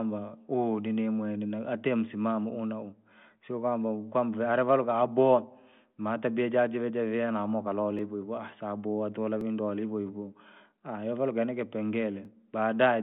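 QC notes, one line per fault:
7.99 s, 9.41 s and 12.25 s: dropped buffer (overrun). The likely cause is the capture program falling behind so the hardware overwrote a block of samples before it was read, each time losing only a millisecond or two. The surviving audio is spliced edge to edge with no gap, so each loss is a tiny skip forward, the first right after "jaa jive javia namukalole", the second between "sababu wantu vala" and "vindo wale hivohivo". The bandwidth of the 40 kbit/s G.726 telephone line stops near 3.5 kHz.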